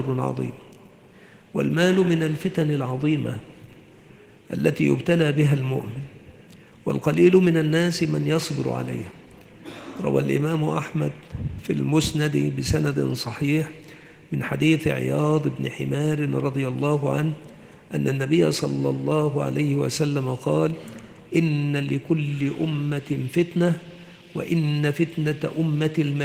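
No technical faults can be heard anywhere in the audio, and the signal holds steady throughout.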